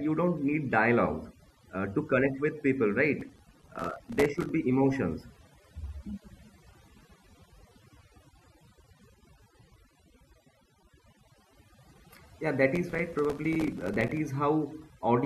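From the start, overdone noise removal is at work on this speech: the reducer cuts frequency bands hard wherever they sit near its noise estimate, so the background drops and breaks up into twinkly specks.

Then at 3.2 to 4.49 s, and again at 12.76 to 14.17 s, you get processor overload crackle. The processor kept missing its deadlines, dozens in a row, and each miss left a tiny hard-edged silent gap, which points to buffers of only a few milliseconds. Together they make a gritty tearing over the voice.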